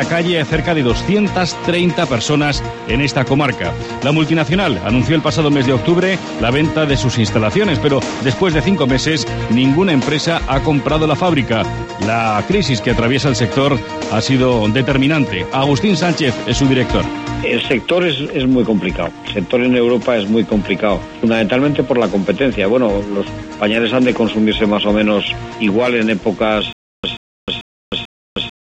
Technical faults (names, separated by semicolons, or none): stutter with silent gaps